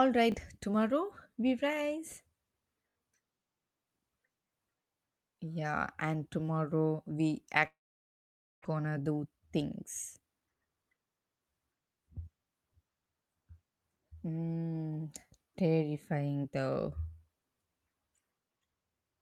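Repeated buffer at 0.32–0.34 s and again at 2.9–2.96 s. In each case fresh audio arrived late, so the playback device played the last 20 ms piece again, which fits a 20 ms buffer. Just before "tomorrow we rise" one extra play gives a quick click-like stutter, losing about 20 ms. At 2.9 s three extra plays make a brief buzzing stutter, and roughly 70 ms is lost.

Long network dropout from 7.67 to 8.66 s, right after "and tomorrow we". The sound briefly smears into a fading buzz, then goes almost silent for about 0.89 s. About 0.6 s of speech never returns when playback resumes. The likely cause is a stretch of network packets that never arrived.

Jitter buffer speed-up from 8.74 to 9.75 s. After the gap, the receiver held too much queued audio. It trimmed repeated tiny pitch-period slices, removing roughly 200 ms, so speech runs at 121% speed with unchanged pitch and sounds noticeably hurried.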